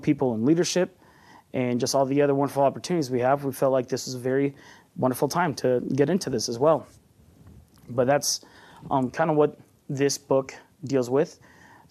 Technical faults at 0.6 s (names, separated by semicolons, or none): none